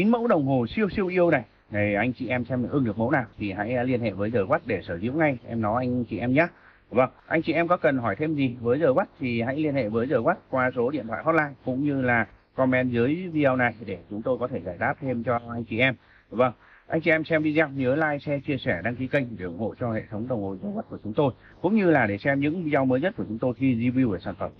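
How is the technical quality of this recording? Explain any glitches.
Nothing to flag here; I don't hear any glitches anywhere in the recording, so there's nothing that needs explaining.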